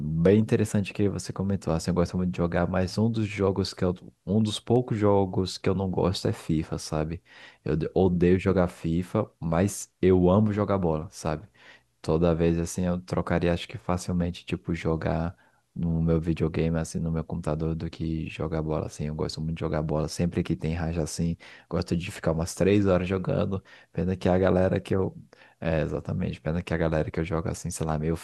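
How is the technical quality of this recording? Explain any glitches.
One glitch stands out in the speech: a single electrical switching spike at 4.76 s. It is a sharp, very brief snap lasting only a couple of milliseconds, fairly quiet at a peak of around -30 dBFS, sitting on top of the speech. The likely cause is a nearby switch, motor or static discharge arcing and coupling into the audio line. On a waveform it shows as a narrow needle; on a spectrogram, as a thin vertical line spanning the full frequency range.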